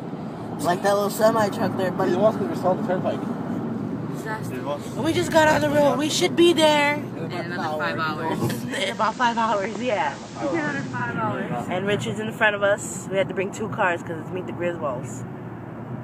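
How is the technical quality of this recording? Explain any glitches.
The recording has one glitch. From 8.63 to 11.19 s, hiss rises and the level drops by about 1 dB. This is digital radio blending to analogue: the receiver lost digital reception and cross-faded over about 405 ms to the station's FM broadcast, with hiss roughly 20 dB below the signal, then blended back.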